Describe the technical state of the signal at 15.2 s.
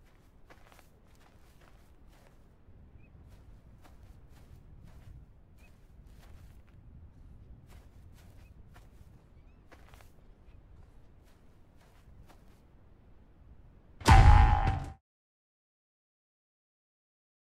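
At 15.2 s the signal is intact, sitting just past the end of a clean, editor-style fade-out that finishes at about 15.02 s, with no click or hard edge.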